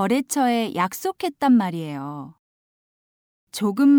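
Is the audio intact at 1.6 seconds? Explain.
Yes, the audio at 1.6 seconds is intact, with no dropout, click, distortion or other fault at that moment.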